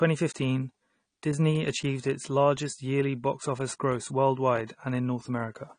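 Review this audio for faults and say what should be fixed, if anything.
Throughout, the speech stops dead at 9.8 kHz and sounds dull and smeared, with fizzy sibilants. This is likely AAC compression at a low bitrate, consistent with about 32 kbps, where the encoder discarded the highs and coarsely quantised the rest. Prevent it by encoding at a higher AAC bitrate or delivering from a lossless master.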